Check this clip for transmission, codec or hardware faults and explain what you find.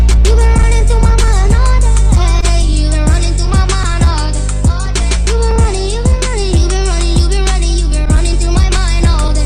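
Three related faults are present, all from a sending clock that runs slow.

Clock drift between sender and receiver: throughout, the sender's clock runs roughly 2% slow, so the jitter buffer keeps draining and the receiver must pad the stream. Unlike random network jitter, the hiccups all point one way.

Repeated timing corrections: from 0.10 to 9.24 s, the receiver repeats short slices to keep up, playing at 99% speed and adding around 150 ms overall. It is heard as a slightly dragging, unevenly stuttering tempo rather than clean gaps.

Short stall from a late packet: at 2.41 to 2.44 s, the buffer ran empty and 15 ms of the last sound was held. Nothing is lost, which distinguishes it from a dropout.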